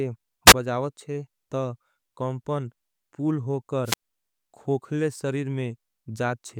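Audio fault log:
0.46–0.54 s and 3.84–4.02 s, wireless microphone squelch dropout. The radio link from the microphone fades, and the receiver's squelch cuts the output rather than pass static. Each time a short burst of hiss rises, then the speech drops into a near-silent hole. The first hole lasts about 12 ms, just before "बजावत छे". The second lasts about 86 ms, between "कामपन पूल" and "खोखले सरीर". The speech returns once the signal recovers.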